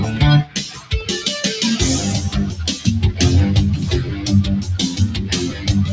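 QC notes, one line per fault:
Throughout: noise suppressor applied to music or sounds. A speech-tuned suppressor treats steady tones and tails as noise, so the level swings by roughly 10 dB and pumps.
0.44–0.93 s and 5.49–5.69 s: sound cut by the noise suppressor, dipping by about 11 dB and about 8 dB, as sustained parts are mistaken for noise and pulled down.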